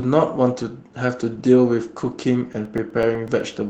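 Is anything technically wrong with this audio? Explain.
Yes, there are two faults.

From 1.33 to 1.39 s there is a lost packet rebuilt from error correction. Two lost packets, likely, were replaced by their low-bitrate copies, so the sound turns briefly rougher and noisier instead of breaking off.

From 2.53 to 3.53 s there are periodic USB or driver dropouts. Every 0.125 s, about 2 ms is replaced with silence, giving about ten evenly spaced ticks over the speech.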